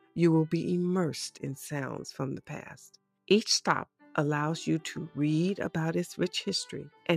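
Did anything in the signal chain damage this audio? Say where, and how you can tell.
Yes, right at the tail. From 6.93 to 7.08 s there's sound cut by the noise suppressor, so this happened in call processing. The level sags by about 7 dB over roughly 150 ms. The suppressor misread that stretch as background noise and pulled its gain down harder than everything else, which shaves the level and clips any decay short instead of letting it ring out naturally.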